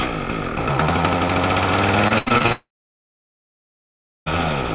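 From 2.08 to 2.52 s the audio turns choppy and a bit robotic. That's repeated packet loss: about half a dozen short holes land close together, the longest around 81 ms, and each gets patched by stretching the last bit of sound. Close to half of that stretch is filler, so it comes across as choppy stutter with chunks missing. The band-limited tone throughout, nothing above 4 kHz, fits a G.711 call path.

Right at 2.52 s the sound cuts out and doesn't come back until 4.28 s. For the first tenth of a second or so you get a fading buzz, then about 1.6 s of dead silence, and when the audio resumes at 4.28 s the missing stretch is just gone. That pattern points to a long network dropout as the likely cause. Nothing arrived for around 1.7 s, so the receiver held the last sound briefly and then gave up.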